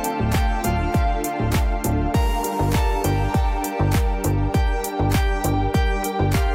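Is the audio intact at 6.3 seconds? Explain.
Yes, at 6.3 seconds the audio is intact, with no dropout, click, distortion or other fault to be heard.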